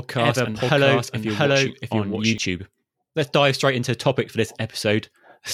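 Speech carrying a doubled audio track from the start to 2.38 s: a same-level full-band copy trails by about 0.7 s, then cuts off abruptly, likely from a slower second capture path.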